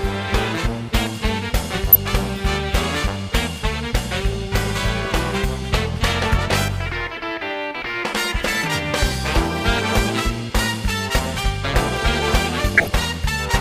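DAB burbling at 1.92–1.96 s, 4.98–5.05 s, 9.68–9.81 s and 12.75–13.11 s: residual bit errors corrupt sub-band data, giving short noise blips and level jumps in single sub-bands, seen as isolated band-limited blocks flaring on the spectrogram.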